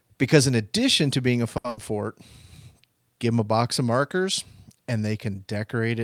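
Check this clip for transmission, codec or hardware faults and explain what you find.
Two network faults occur close together in this speech clip, both right after "addition to being a".

From 1.57 to 1.68 s, a short stall from a late packet: the jitter buffer emptied, so about 70 ms of sound is held with a slight buzz, then resumes with nothing lost.

From 1.69 to 1.79 s, a burst of packet loss: about 80 ms was lost or came too late to play and was concealed by a fading continuation, so that stretch of speech is missing.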